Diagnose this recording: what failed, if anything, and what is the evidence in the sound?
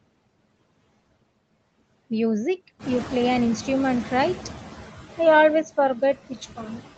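The call-processing noise suppressor is failing in a way that leaves audible artifacts throughout. It pulls the steady background down by about 20 dB frame by frame. The residual noise sinks in the gaps and swells under the speech.

The noise suppressor is catching up after a change in the room. The room noise jumps by about 12 dB around 3 s, and the suppressor's noise estimate lags behind it. From 2.79 to 4.66 s the louder background gets only about 9 dB of reduction, then settles as the estimate adapts over about 1.87 s.

Near the end, speech is cut by the noise suppressor because it misreads parts of the speech as noise. From 5.96 to 6.37 s, parts drop by up to about 13 dB, roughly a tenth of a second in total. From 6.56 to 6.81 s, they drop by up to about 15 dB, roughly a fifth of a second in total. Those parts sound swallowed or faint.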